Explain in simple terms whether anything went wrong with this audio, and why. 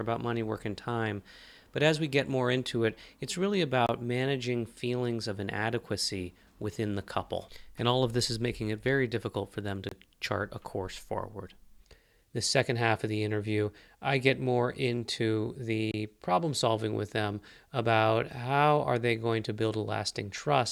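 Something did go wrong: a gap between chunks. The audio seems to have been handled in pieces about 6 seconds long, and a brief silence of about 25 milliseconds was left at each join. You hear this at 3.87 s, after "into it it's really", at 9.89 s, after "very difficult for them", and at 15.92 s, after "I get more into". Unlike a dropout, no speech is missing; it resumes exactly where it stopped, with a tiny hole at steady six-second spacing.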